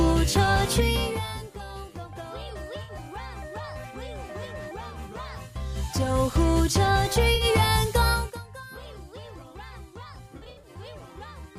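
At 2.82 to 2.92 s and again at 7.34 to 7.44 s, AAC frame loss with concealment leaves short smeared, phasey patches. Each is about 64 ms of missing audio, which fits roughly three lost frames, patched by the decoder from the preceding spectrum. From 10.37 to 10.69 s, about 171 ms is lost in scattered bursts across 256 ms, the longest near 70 ms, giving a noisy flutter. On a spectrogram these appear as blurred, texture-less blocks.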